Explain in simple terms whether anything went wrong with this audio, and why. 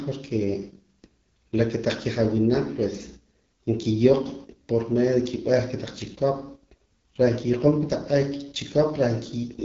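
Something did go wrong. The whole clip went through the AMR wideband (HD Voice) codec, the phone-call coding system. It was squeezed very hard, close to its lowest setting. That makes the speech sound rough and raspy throughout. Nothing above 7.3 kHz survives.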